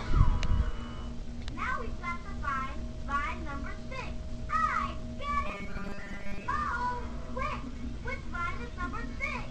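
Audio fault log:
5.46 to 6.43 s, robotic sound from repeated short buffers: for about a second the sound collapses into a stiff, metallic buzz at 200 Hz that only loosely tracks the underlying audio. The likely cause is fresh audio arriving too slowly, so playback keeps looping the last fragment, about 5 ms long, which sets that pitch. Most of that stretch, roughly two thirds or more, is repetition rather than real signal.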